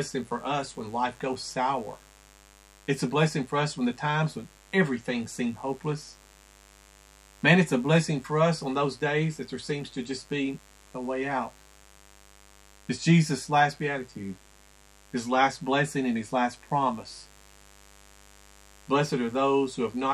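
A mains buzz runs through the whole clip. Sharp switching spikes from the 50 Hz supply leak in twice per cycle. That spreads harmonics up into the kilohertz range. It sounds like a steady, raspy buzz, sitting roughly 30 dB below the sound.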